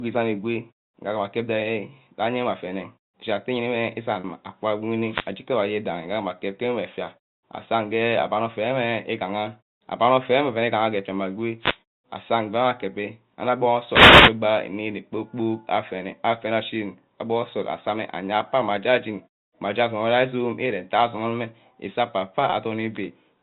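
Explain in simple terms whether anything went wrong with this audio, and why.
At 4.2 s and again at 22.5 s, the sound briefly freezes into a held, slightly buzzy tone lasting about 40 ms and 20 ms. This is packet loss with pitch repetition: small pieces of the signal were lost in transit, and the receiver covered each gap by repeating the last pitch cycle.

From 5.06 to 5.29 s, 11.58 to 11.79 s, and 13.88 to 14.37 s, short swishes of static cut across the speech. These are wireless microphone noise hits. The radio link from the microphone briefly faded, so receiver noise rose and partly covered the voice. The last hit, about half a second, is the longest.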